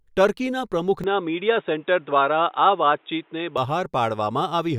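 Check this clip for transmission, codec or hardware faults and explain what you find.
One fault is present. From 1.04 to 3.58 s the input likely switched to a poorer device, whose band stops at 3.8 kHz: speech turns dull and boxy over faint new noise, then clears.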